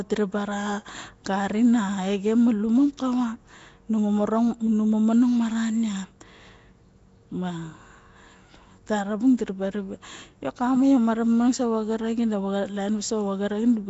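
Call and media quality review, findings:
Rough, hissy halo and smeared, underwater texture across the whole speech clip; likely Nellymoser compression. Fixed low bit allocation per block starves weak bands, which are refilled with noise. Audible damage fits about a 32 kbps Nellymoser Asao stream. Spectrogram: hard ceiling with nothing above 7.7 kHz, speckled noise-filled patches between harmonics, blurred formant edges.

Pre-echo at 2.97 s: short hiss just ahead of a sharp attack, onset softened. Transform codec spreads quantisation noise across the block, so noise sized for the loud attack leaks into the quiet moment before it. Waveform: low fuzz about 13 ms before the transient. Spectrogram: broadband smear preceding the attack's vertical edge.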